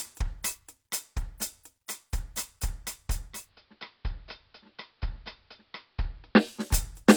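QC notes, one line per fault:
3.24–6.70 s, digital radio blending to analogue: the music cross-fades over about 333 ms to the AM analogue broadcast, dropping about 2 dB in level and gaining faint hiss roughly 40 dB down, then blends back to digital.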